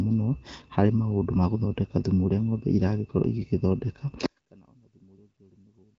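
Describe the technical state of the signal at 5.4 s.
At 5.4 s the speech has all but vanished: from 4.26 s to the end of the clip the level drops by about 33 dB, leaving only a faint remnant. That's likely one channel inverted. With one side's polarity flipped, everything the two channels share cancels when they're summed to mono, so the centred voice collapses and you hear just the small difference between left and right.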